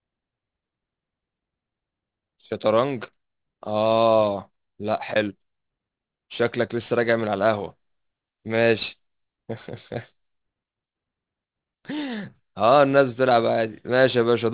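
Aliasing throughout: resampling, apparently to 8 kHz, skipped filtering, so sibilants fold back metallic below 4 kHz. On a spectrogram, energy runs hard up to that edge.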